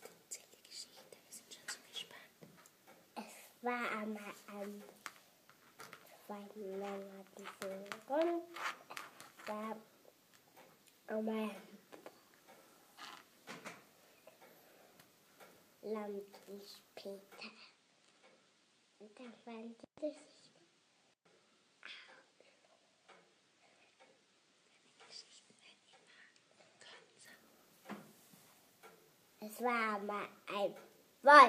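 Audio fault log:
17.38–27.25 s: input switched to a poorer device. Everything above 9.6 kHz vanishes and the level drops about 5 dB. A faint new noise floor sits far below. No gap marks either change. The input likely moved to a narrower-band device, then back.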